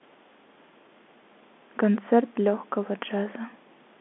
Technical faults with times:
none

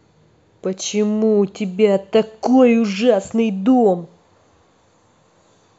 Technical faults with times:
none

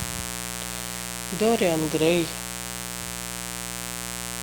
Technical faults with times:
0.00-4.42 mains buzz

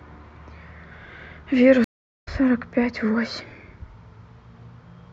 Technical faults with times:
1.84-2.28 stream reconnect

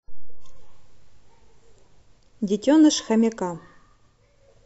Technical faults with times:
none

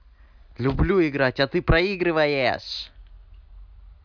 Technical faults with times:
none

